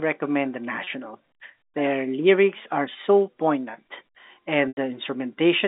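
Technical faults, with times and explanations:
0.84–0.87 s and 4.68–4.77 s, packet loss with pitch repetition: Audio went missing in transit, 30 ms at the first point (consistent with one lost packet) and 90 ms at the second (about three packets' worth). The receiver filled each gap by replaying the last pitch cycle. The short gap becomes a brief buzzy hold. The longer one outlasts the roughly 50 ms fade-out, so the repeated cycle dies to silence before the sound cross-fades back in over the band-limited G.711 line.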